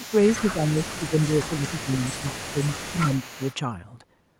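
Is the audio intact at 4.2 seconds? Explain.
Yes, at 4.2 seconds the audio is intact, with no dropout, click, distortion or other fault at that point.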